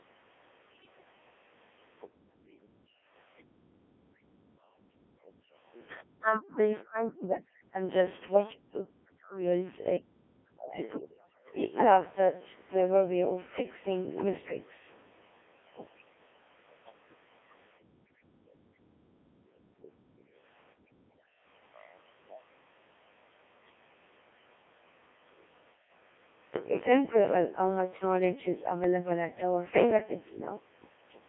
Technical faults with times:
0.00-31.29 Codec 2 vocoder
0.73-1.04 bit errors on digital voice radio
8.28-8.43 bit errors on digital voice radio
28.84-29.13 bit errors on digital voice radio

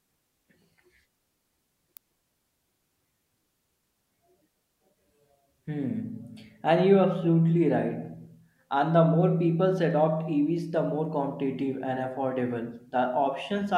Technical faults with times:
1.97 electrical switching spike

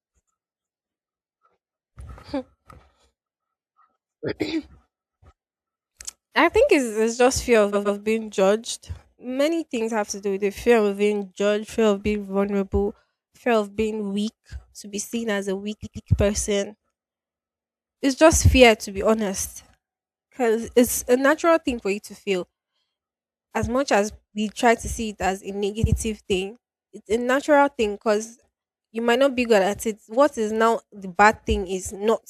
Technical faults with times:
7.72-7.98 repeated frames
15.83-16.08 repeated frames
25.85-25.94 repeated frames

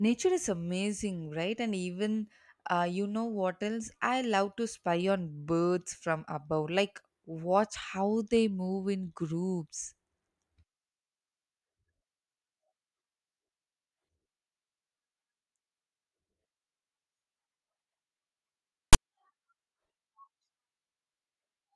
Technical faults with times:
18.93 file tags played as audio

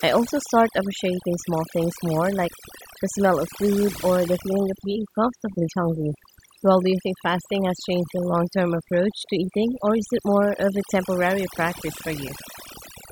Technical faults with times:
0.00-13.11 overdone noise removal

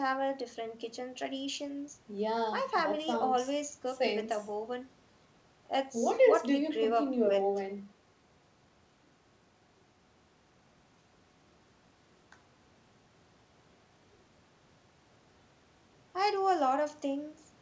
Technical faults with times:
none

